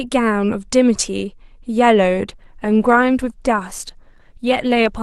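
At 2.28 s the audio switches abruptly to an adaptive stream at a lower bitrate. From there to the end codec artefacts rise. The change happens without any gap, unlike a dropout.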